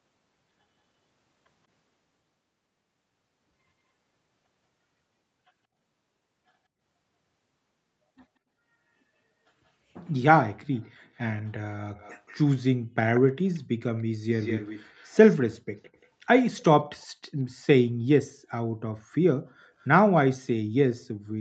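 From 11.97 to 12.35 s, then 13.15 to 16.07 s, a faint echo leak trails the speech by 181 ms, about 30 dB down and then stronger at about 15 dB down. It is a distinct delayed repeat rather than a reverb smear, likely from a loudspeaker echo canceller letting the far-end voice back through.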